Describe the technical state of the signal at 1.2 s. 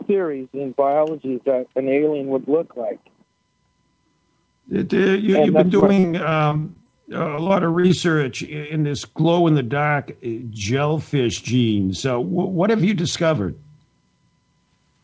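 At 1.2 s the audio is intact, with no dropout, glitch or distortion, just the steady band limit of a wideband call path that carries nothing above 8 kHz, which fits a G.722 codec.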